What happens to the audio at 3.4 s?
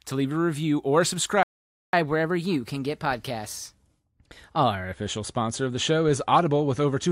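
That's catch-up at higher speed: from 1.93 to 4.93 s, just after "leave a review or", the player resamples its backlog at 1.1x, so the speech runs quicker and about a semitone and a half higher until "sponsor of the show".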